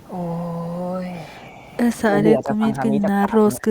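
Speech suppressed in double talk appears three times, from 2.09 to 2.14 s, 2.3 to 2.65 s, and 2.89 s to the end of the clip. The speech dips slightly in the first brief moment, by about 5 dB, then drops harder, by about 15 dB and finally about 20 dB. The likely cause is an echo canceller that could not tell this talker from loudspeaker echo while both sides spoke, and so turned the talker down.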